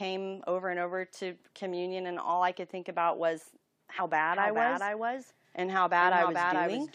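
At 3.96 to 4.01 s the speech jumps forward by roughly a tenth of a second, the signature of compressed frames skipped: whole frames never reached the output. On a spectrogram, formant tracks break and resume slightly displaced.

From 4.33 s to the end, a doubled audio track appears. A full-band copy of the speech trails about 400 ms behind, around 5 dB quieter, with no reverberant tail. It most likely comes from a second, slower capture path. It starts abruptly, and a spectrogram shows every syllable's pattern repeated at a fixed offset.

At 5.75 to 5.78 s, a corrupt frame decoded produces a brief glitch, peaking around -25 dBFS. Damaged bits were played as if valid across roughly two frames, placing energy at wrong frequencies. It shows as a narrow vertical smear of misplaced energy unrelated to the speech harmonics.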